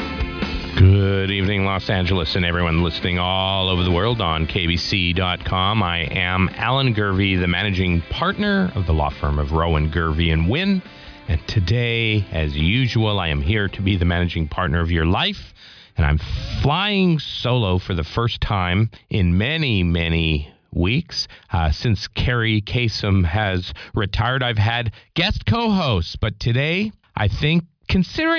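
Nothing stood out as a technical problem at any point on listening.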